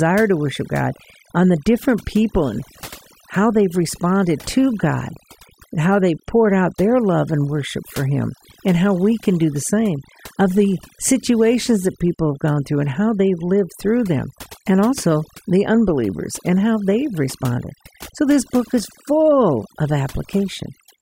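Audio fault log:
Throughout, overdone noise removal: background drops and breaks up into twinkling specks as quiet bands are gated away, unlike steady codec smearing.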